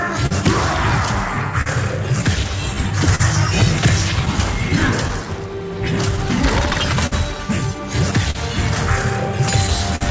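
Clock drift between sender and receiver runs through the whole clip. The sender's clock runs roughly 4 percent slow, so the jitter buffer keeps draining. The receiver has to pad the stream, and brief hiccups recur at uneven intervals from start to finish.

Repeated timing corrections, from 0.08 to 8.19 s, are how the receiver keeps pace. It plays at 99 percent speed and repeats small slices, adding roughly 70 ms in total. Every edit goes the same way but is unevenly spaced, and each one is small.

A short stall from a late packet occurs at 0.26 to 0.33 s and again at 1.62 to 1.68 s. Each time the buffer ran empty and the receiver held the last sound for 43 ms until the packet arrived. Nothing is lost, but the held sound drags with a slight buzz or dip.

Scattered short gaps appear between 3.15 and 5.11 s and again from 6.16 to 7.14 s. There are about four small holes in each stretch, the longest about 40 ms and about 50 ms. 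Each is patched by continuing the previous sound, leaving brief ticks and smears.

A short stall from a late packet returns at 8.31 to 8.37 s, held for 41 ms, and at 9.96 to 10.03 s, held for 51 ms. Both are prolonged sounds, heard against a call-path band that stops at 8 kHz, which points to G.722 at 64 kbps.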